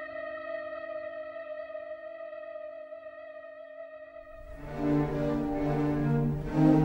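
Nothing in this audio comes across as a technical fault; it all sounds the way it should.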